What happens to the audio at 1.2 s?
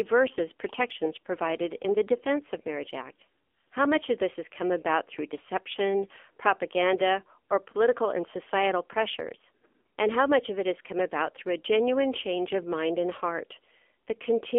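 At 1.2 s you're hearing the AMR narrowband mobile codec, which runs the whole clip: speech squeezed into roughly 300 Hz to 3.4 kHz and sounding buzzy and synthetic, which fits a low bitrate around 7.4 kbps.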